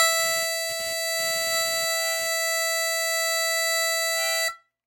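From the top of the music until about 2.28 s there's computer activity noise: a buzzy, chirping whine pulsing around 300 Hz, roughly 25 dB under the music. The machine's load swings are shifting the audio ground, so the buzz follows the computer, not the track.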